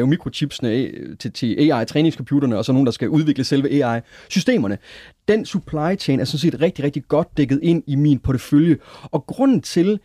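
No technical faults can be heard anywhere in this speech recording. At no point does the signal path draw attention to itself.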